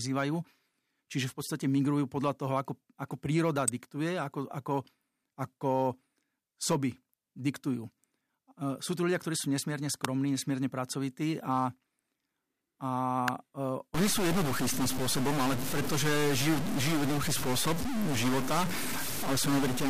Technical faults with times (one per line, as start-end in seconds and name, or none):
3.68 electrical switching spike
10.05 electrical switching spike
13.28 electrical switching spike
13.94-19.90 stuck bit